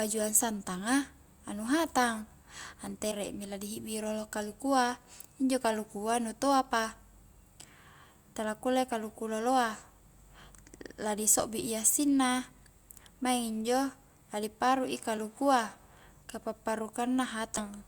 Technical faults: compressed frames skipped

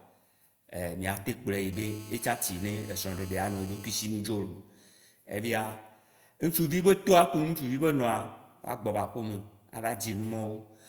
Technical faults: GSM phone buzz

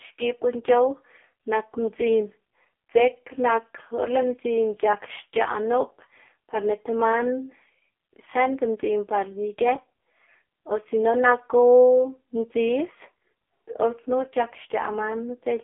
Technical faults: AMR narrowband mobile codec

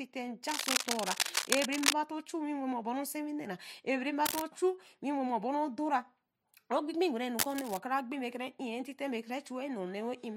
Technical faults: cable scratch noise

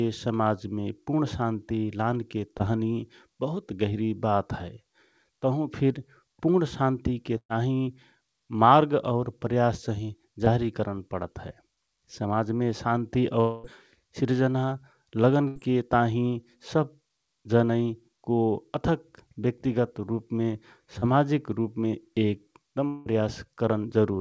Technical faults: short concealed packet loss; burst of packet loss; long network dropout

